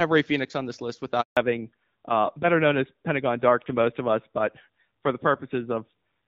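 Right after "on this list", at 1.21 s, the speech cuts away almost instantly and leaves 160 ms of dead silence, with sound resuming at 1.37 s. This is a handover gap. The call was being passed from one network link to another, and during that switch no speech frames reached the receiver. There was nothing to decode, so whatever was said in that window is simply missing rather than garbled.

From 1.37 s to the end, the sound turns duller and rougher. The crispness of consonants like s and f thins out, because nothing above 4 kHz remains. This is a fallback to narrowband. Before the gap, the light texture of the AMR wideband (HD Voice) codec at 12.65 kbit/s carried detail up toward 7 kHz. After the handover, the new link settled on an older narrowband codec, which fits AMR-NB at 7.4 kbit/s, so the upper band is gone for the rest of the clip.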